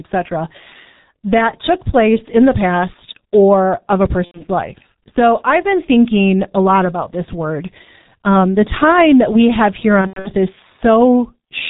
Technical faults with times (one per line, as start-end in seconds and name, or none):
0.00-11.69 G.723.1 codec
4.25-4.43 VoIP packet loss concealed by the speech codec
10.01-10.31 VoIP packet loss concealed by the speech codec